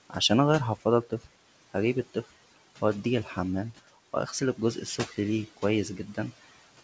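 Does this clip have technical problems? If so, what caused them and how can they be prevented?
Yes. Noise suppressor artifacts run through the whole clip: the background is pulled down by about 17 dB between phrases and lifts back under speech. Unlike steady room noise, it pumps with the speech. Gentler suppression settings prevent it.

Speech cut by the noise suppressor occurs at 0.76–0.86 s, 1.03–1.28 s, 2.14–2.31 s and 4.81–5.17 s (right after "واغسل الجزء"), with drops of about 10 to 16 dB. The suppressor mistook quiet speech for noise. Unlike a dropout, the sound fades rather than vanishing. A less aggressive noise threshold prevents it.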